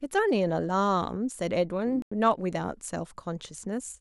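A speech clip with one dropout: a corrupt frame muted from 1.94 s to 2.12 s. The sound cuts to silence abruptly, with no fade, for about 0.17 s, which fits roughly three compressed frames being rejected by the decoder after bit damage and replaced with silence by the player. On a waveform this shows as a flat line with sharp edges. A spectrogram shows a clean vertical gap across all frequencies. Timing is preserved, so the speech resumes in place with no shift.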